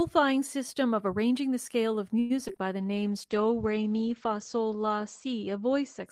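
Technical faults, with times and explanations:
2.19–2.59 s, repeated packet loss (robotic sound), right after "arranging the scale of": four gaps, longest 105 ms, patched by stretching earlier sound. Choppy result, with pieces missing.
2.80–6.11 s, call bitrate drop: bitrate falls from 32 to 11 kbps, bandwidth from 20 kHz to 8 kHz. Speech turns coarse and muffled.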